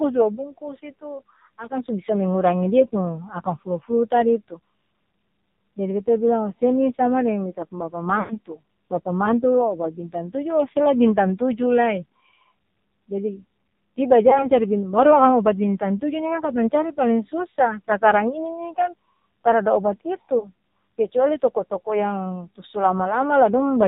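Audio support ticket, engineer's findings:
AMR narrowband mobile codec, whole clip: band stops at 4 kHz, speech heavily buzzy and synthetic. Points to a low AMR-NB mode near 5.9 kbps; sparse pulse excitation cannot carry natural voice texture.

Lost AMR speech frames, 8.20–8.37 s: sound smears then fades toward silence, about 100 ms missing, consistent with five consecutive frames. Brief dips at 14.30 s and 20.40 s, each one 20 ms frame. Radio errors failed the frame checksum, so the decoder repeated the last good parameters with decaying gain.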